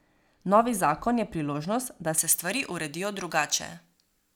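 Pre-emphasis left on from 2.18 s to the end at 4.36 s: the treble boost applied for transmission was never undone by the matching de-emphasis, leaving 10 kHz about 11 dB above 1 kHz, which fits a J.17 curve. The speech turns thin, bright and sharply sibilant.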